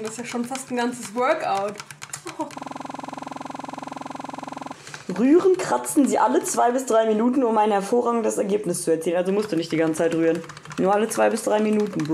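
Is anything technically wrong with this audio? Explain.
Yes. There is a system hang loop from 2.58 to 4.74 s. The playback system stalled while the audio hardware kept replaying its ring buffer. A single 46.44 ms slice of sound repeats exactly, over and over, for about two seconds. That length fits a 2048-sample buffer. The repeat rate of 21.5 Hz sits between a buzz and a stutter. It is heard as a rapid, mechanical rattle in place of the normal sound.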